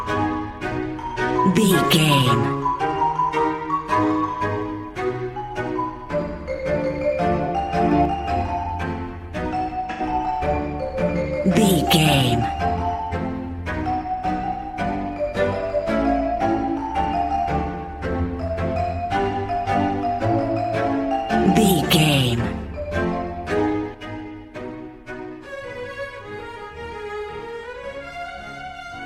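AAC frame loss with concealment at 7.43 to 7.49 s: a gap of about 43 ms, which fits one lost frame, is filled by the decoder from the last good spectrum, leaving a brief smeared, noisy patch. A sudden gain jump follows from 7.92 to 8.05 s: sound and background rise together by about 5 dB with no ramp, likely a gain setting applied in one step. Another AAC frame loss with concealment at 9.91 to 10.01 s lasts about 85 ms, consistent with two consecutive frames, so the rebuilt stretch is longer. From 23.94 s to the end, a sudden gain jump drops everything by about 6 dB at once, likely an unramped gain change.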